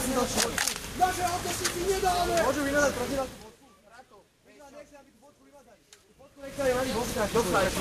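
Gain pumping runs throughout this recording of sounds. The level swings by around 5 dB, pulled down on loud sounds and recovering after them. This is likely from excessive input gain driving a fast limiter or compressor.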